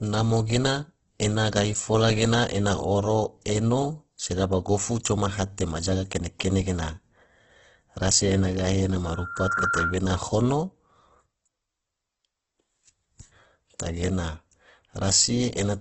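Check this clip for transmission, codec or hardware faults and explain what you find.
There's one fault, and it runs through the whole speech clip: heavy Opus compression is the likely cause of what you're hearing. Nothing comes through above about 8.2 kHz, so the top end is flat and dull. With the bits this scarce, the encoder rebuilds thin bands by copying lower ones or filling them with noise. That makes voiced sounds rough and grainy rather than swirly. It all fits a very low rate, around 12 kbps.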